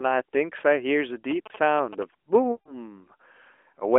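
From 1.31 to 2.03 s there are GSM signalling bursts: a nearby phone's radio pulses get rectified into a galloping tick-and-buzz at about 217 Hz, sitting well under the speech. Then at 2.52 to 2.75 s we get lost AMR speech frames, around 140 ms, which fits seven 20 ms frames. The decoder stretches the last good sound, fades it toward silence, and the speech returns a bit rough.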